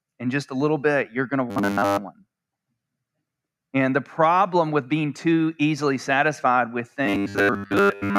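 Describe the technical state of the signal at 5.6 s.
At 5.6 s the signal is intact, with no audible technical fault at that moment.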